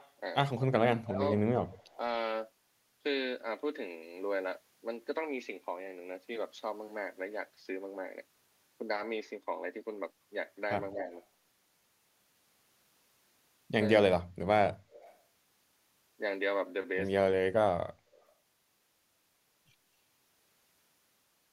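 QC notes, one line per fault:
0.00–0.11 s, echo leak: a faint copy of the speech trails about 217 ms behind, roughly 30 dB down. This is likely loudspeaker pickup that the far-end canceller missed. It is a discrete repeat, not a reverberant tail.
1.03–1.21 s, speech suppressed in double talk: the speech dips by about 20 dB for around a fifth of a second. The canceller likely ducked its own talker along with the echo during overlap. It is a loss, not an added copy.
1.71–1.94 s, echo leak: a faint, separate repeat of the speech arrives 219 ms late at about 30 dB below it. This is likely residual loudspeaker echo sent back, distinct from room reverb.
10.93–11.09 s, speech suppressed in double talk: a shallow dip of about 5 dB lasts around a tenth of a second. The canceller likely turned the speech down while both sides overlapped. It is a brief level sag, not a dropout.
14.91–15.17 s, echo leak: a delayed duplicate of the speech sits 236 ms behind at about 30 dB down. 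This is likely uncancelled far-end loudspeaker pickup, heard as a second arrival rather than smearing.
17.39–17.54 s, speech suppressed in double talk: the speech nearly cuts out, dropping about 35 dB for roughly 150 ms. The canceller likely suppressed the talker during overlapping speech. It is a hole, unlike the echo's extra copy.
18.16–18.28 s, echo leak: a very faint repeat, about 35 dB down, follows the speech by 240 ms. This is likely echo the canceller failed to remove. It is a distinct delayed copy, not ambience.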